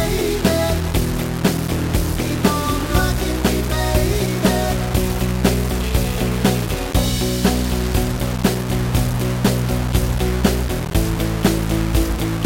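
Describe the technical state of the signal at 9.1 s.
At 9.1 s the sound is coarse and grainy, with a rough distortion that shifts along with the signal, and the quietest parts either fall to nothing or sputter between two levels. This low bit depth without dither runs through the whole clip, so this moment is no exception. The likely cause is rounding to about 4 bits with no dither, which leaves an error that follows the signal and sits only about 10 dB below it.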